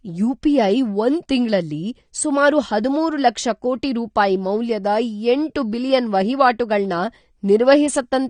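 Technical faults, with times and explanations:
Throughout, AAC compression: the speech sounds dull and smeared, with a fizzy, warbling texture on sibilants and sustained sounds, and nothing at all above 9.7 kHz. This is likely AAC-LC coding at a bitrate near 32 kbps, where the encoder lowers its cut-off and quantises coarsely. On a spectrogram the energy stops at a hard horizontal ceiling at 9.7 kHz, with blocky smearing in the bands below it.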